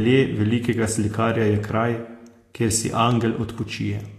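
Plainly audible lossy encoding, likely Vorbis compression at a low setting that fits a bitrate around 36 kbps, runs throughout the speech. Nothing remains above 14.2 kHz, and the coarsely quantised treble turns into hissy, grainy noise, roughening tones and blurring consonant attacks.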